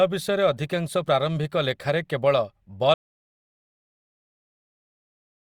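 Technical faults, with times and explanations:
2.94 s to the end, audio dropout to silence: speech cuts off mid-flow into dead silence with no room tone, likely from the input being lost while recording continued.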